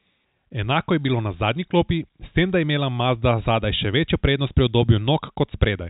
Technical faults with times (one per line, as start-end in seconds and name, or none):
none